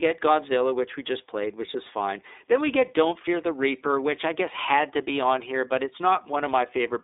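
Speech with iLBC codec damage throughout, plainly audible: the band is held to roughly 300 Hz–3.7 kHz with nothing above 3.8 kHz, and each 30 ms frame is coded on its own, giving a rough, synthetic edge (fitting the 13.33 kbps mode) that a clean narrowband line would lack.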